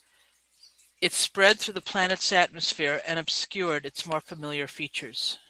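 At 1.48 s there's a call bitrate drop that runs to the end. The bandwidth estimate fell, so the encoder went from 32 kbps to 11 kbps and cut the top end from 20 kHz to 8 kHz, which leaves the speech muffled and watery.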